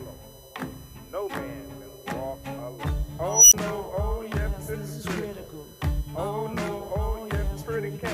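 A USB whine runs through the whole clip: a fixed-pitch tone built on 1 kHz, with its strongest component at the 13 kHz harmonic, sitting roughly 25 dB below the wanted signal. The 1 kHz spacing matches the 1 ms frame rhythm of a USB bus. Current drawn in those regular bursts has leaked into the audio path through shared power or ground, so the interference appears as a steady high whine under the sound.

From 3.28 s to 3.54 s an unstable filter takes over. A tone somewhere near 5 kHz swells for about 0.24 s into a loud squeal that clips. The output then drops to silence for about 20 ms before the audio returns. A recursive filter with bad coefficients has fed its own output back with growing gain. The values overflowed, and the output stayed muted until the filter state reset.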